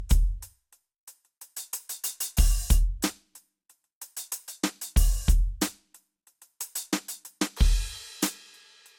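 From the start to the end, the music has generation loss. It sounds swirly, smeared and hollow, and attacks blur. Nothing remains above 18 kHz. The likely cause is repeated MP2-style encoding, around ten passes, each adding fresh quantisation noise.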